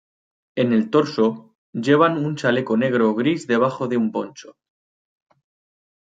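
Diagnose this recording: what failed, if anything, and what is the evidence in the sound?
Nothing failed; no faults audible.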